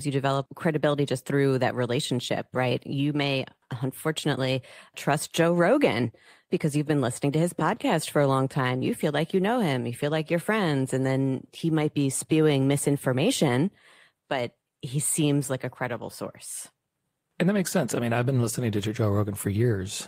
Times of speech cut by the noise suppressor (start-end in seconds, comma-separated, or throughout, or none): none